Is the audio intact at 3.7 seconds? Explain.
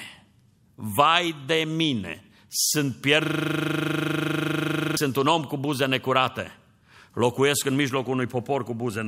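No. At 3.7 s the audio sits inside a system hang loop running from 3.25 to 4.97 s, between "vai de mine sunt" and "un om cu buze". The machine stalled while the hardware kept replaying one 40 ms buffer, so a steady 25 Hz buzz replaces the speech. The waveform shows an identical block repeated about forty times, and the spectrogram shows matching vertical stripes every 40 ms.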